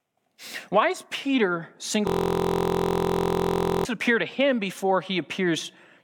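From 2.07 s to 3.85 s the speech collapses into a steady, rough buzz at about 43 Hz. That's a system hang loop: the computer or driver stalled while the audio hardware kept replaying the same ring buffer. Here it's one 23.22 ms slice, which fits a 1024-sample buffer, repeated 77 times back to back. With a chunk that short you don't hear a stutter, just a fixed drone at the loop rate until things recover.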